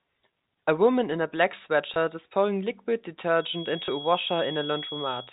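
Packet loss with last packet repeated occurs first at 1.94 to 1.96 s, between "woman in a black" and "is pouring liquid". A 20 ms gap, consistent with one lost packet, was filled by replaying the preceding stretch of audio, and the repeat is heard as a small blip. The same fault returns at 3.86 to 3.88 s, again 20 ms long and heard as a small blip.

Feedback whistle runs from 3.33 s, just after "is pouring liquid", to the end of the clip. It is a thin, steady tone at 3.3 kHz sitting roughly 15 dB below the speech and swelling and fading slowly in level. The likely cause is a loudspeaker-to-microphone loop held right at the edge of howling, which keeps that one frequency ringing without letting it build up. Because the tone lies below the 4 kHz ceiling of the G.711 telephone coding, it passes straight through the narrowband channel.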